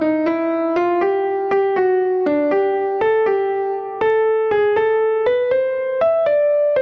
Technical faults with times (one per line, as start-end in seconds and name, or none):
0.00-6.81 gain pumping